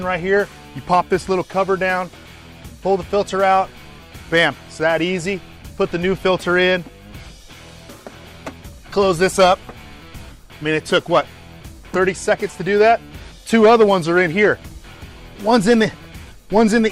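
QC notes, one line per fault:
No technical faults are audible in the signal.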